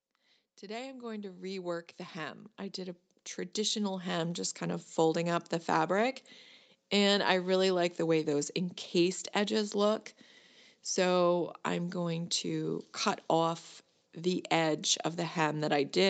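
Automatic gain rising, 0.61 to 5.56 s: the gain control judged the speech too quiet and raised it about 16 dB, swelling voice and background together.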